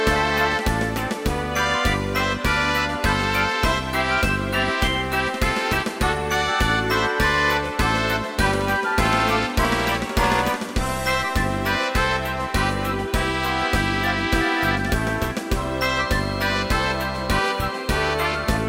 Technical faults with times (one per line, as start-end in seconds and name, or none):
15.89-18.68 feedback whistle